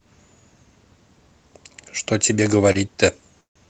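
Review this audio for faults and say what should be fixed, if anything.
At 2.72 to 2.78 s there is a short stall from a late packet. The jitter buffer ran dry and the last sound is stretched about 22 ms, then resumes with nothing lost. A dropout would remove audio instead.

At 3.41 to 3.67 s there is a call audio freeze, likely from packets held up in transit. A fading hold turns into about 140 ms of silence, then the sound continues from where it stopped rather than skipping ahead.

A larger, adaptive jitter buffer and a steadier network route would prevent both.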